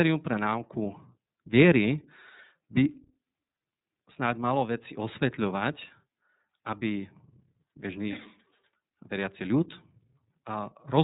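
From start to finish, the speech runs through the iLBC codec, a narrowband VoIP coder. Nothing above about 3.8 kHz survives, so sibilants lose their edge and the sound is muffled and boxy. Each frame's excitation is coded on its own, without help from the frame before. The damage is plainly audible. The speech sounds rough and slightly synthetic. The texture fits the 30 ms frame mode at roughly 13 kbps.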